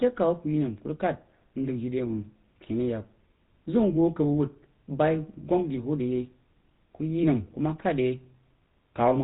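From start to finish the speech carries a buzzy, gravelly roughness and a dull, boxed-in top with nothing above 3.8 kHz. This is GSM full-rate codec damage, plainly audible: the coder rebuilds speech from a vocal-tract model driven by sparse regular pulses, consistent with a 13 kbps GSM stream.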